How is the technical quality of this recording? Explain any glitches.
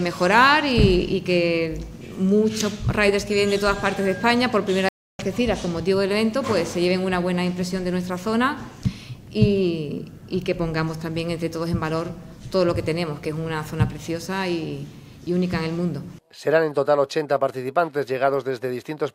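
One glitch stands out: a playback stall. At 4.89 s the sound cuts off in mid-flow and the output goes silent. It resumes at 5.19 s, so the gap lasts about 305 ms. The break is abrupt at both ends and long enough to notice clearly. The likely cause is the player running short of data, or its output thread being blocked briefly. Nothing reached the output until it recovered.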